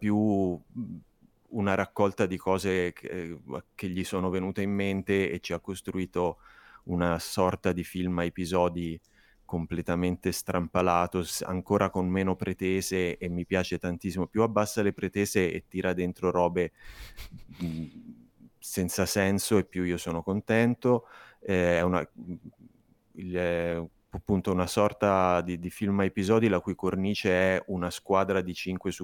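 No technical faults can be heard in this recording.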